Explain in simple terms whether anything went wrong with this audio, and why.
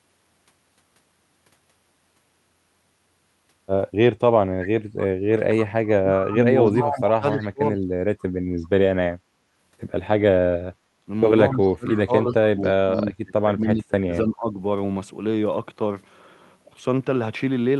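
A couple of things go wrong here, all tied to the echo canceller on the call. From 6.0 to 7.83 s, and again from 11.56 to 14.59 s, the speech sinks and breaks up in patches, about a second and a half in total the first time and about two seconds the second. That's speech suppressed in double talk, likely because both ends were talking at once and the canceller couldn't tell the talker apart from the loudspeaker echo, so it turned everything down.

Inside those stretches there are brief bits of echo leak, at 6.66, 7.40 and 11.91 s, each only a few hundredths of a second. You hear a faint, delayed copy of the voice trailing 274 ms behind, quieter than the main speech. The likely cause is a speakerphone on the other end whose echo canceller didn't fully scrub what its microphone picked up, so a scrap of the sound got sent back.

At 10.81 to 10.93 s the room sound briefly dips, for about a tenth of a second, then comes back. 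That's background gated by the echo canceller: while the loudspeaker was playing, the canceller clamped the microphone down hard, and the background returned as soon as it let go.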